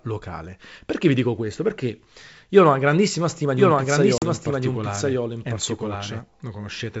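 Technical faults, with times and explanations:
3.56–6.20 s, doubled audio track: just after "ho una grandissima stima", a second full-band copy of the speech enters about a second behind and roughly 5 dB quieter. It has no decay or room colour and starts and stops abruptly, likely because a slower path captured it again.
4.18–4.24 s, packet loss on an ADPCM call: about 40 ms drops to hard-edged silence, which fits two lost packets. The decoder's adaptive predictor and step size fall out of step with the sender's, so speech returns with brief, slight distortion before settling.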